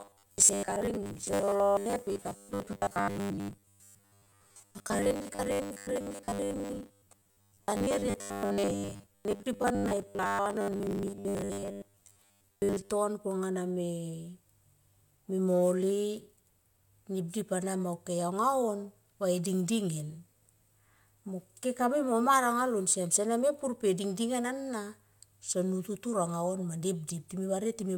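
0.01 to 12.92 s: robotic sound from repeated short buffers, a rigid 100 Hz metallic buzz, likely 10 ms chunks looped over most of the speech, not a pitch shift.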